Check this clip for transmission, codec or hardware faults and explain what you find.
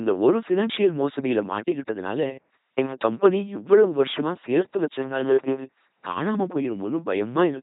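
The whole clip has gone through an LPC-10 vocoder, and it's heavily damaged. Throughout, the speech is rebuilt from a small all-pole vocal tract filter fed by either a pulse train or noise, with each moment forced to fully voiced or unvoiced. That's why it's a buzzy, mechanical robot voice with nothing above 3.9 kHz. The sound fits a 2.4 kbit/s LPC-10 stream.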